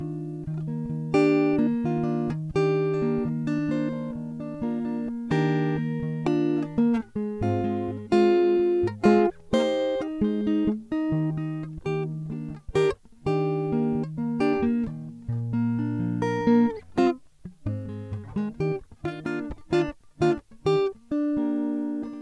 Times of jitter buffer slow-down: none

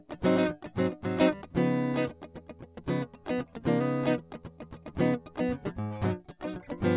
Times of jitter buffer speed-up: none

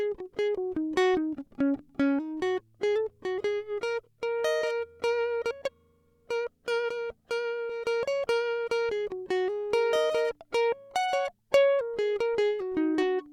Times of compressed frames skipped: 0.57, 7.69

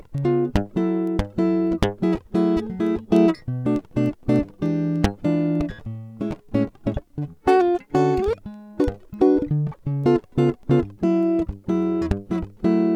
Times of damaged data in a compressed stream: none

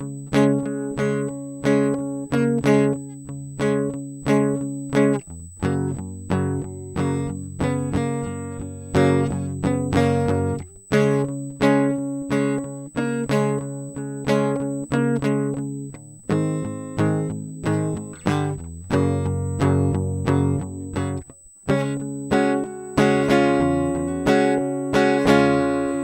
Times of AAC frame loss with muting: none

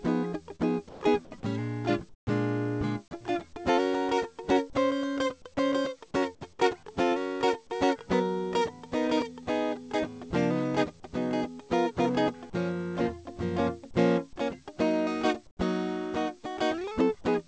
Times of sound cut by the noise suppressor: none

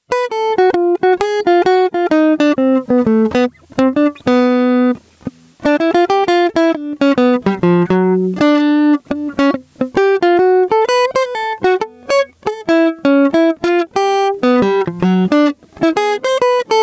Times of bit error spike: none

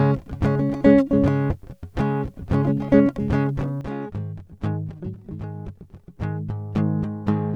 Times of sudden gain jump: 3.81-7.56

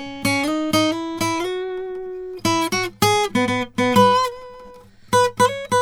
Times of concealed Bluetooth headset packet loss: none

